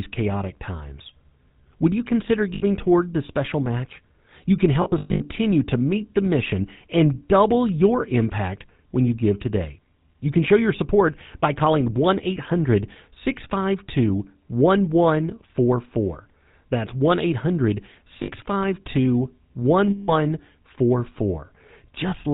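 Speech heard through the GSM full-rate codec. Nothing passes above 4 kHz. The voice has a buzzy, gravelly roughness, and the codec damage is plainly audible. The coarse pulse-driven vocal-tract sound fits a 13 kbps full-rate stream. Lost GSM frames cause four dropouts. Each gap repeats the last good frame, heard as a rough metallic ring. At 2.54 to 2.63 s, after "you consider", 80 ms is held. From 4.82 to 5.27 s, before "to meet the mission", 280 ms of losses scatter over 440 ms. The longest run is around 100 ms. Shorter holds follow at 18.22 to 18.32 s (60 ms) and 19.90 to 20.11 s (180 ms).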